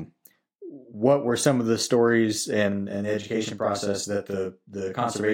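From about 2.72 s, right after "some of the stories", the speech turns thick and doubled, as if two people were speaking in near-unison a hair apart, and this holds to the end. This is a channel delay (doubling): one channel runs about 40 ms behind the other, and when both are folded to mono the late copy arrives at equal level, too far back to blend, so it lands as a tight slap.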